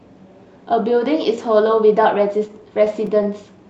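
From 2.48 to 3.27 s, scattered short gaps break into the speech. About five packets went missing or arrived late. Each hole, the longest near 10 ms, was patched by extending the sound just before it. Brief ticks and small smears result.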